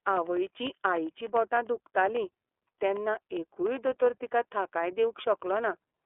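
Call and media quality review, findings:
iLBC codec damage across the whole speech clip. Line band 300 Hz to 3.4 kHz, nothing above 3.7 kHz. Plainly rough, synthetic texture. The codec codes each frame's excitation independently. The sound fits 30 ms frames at 13.33 kbps.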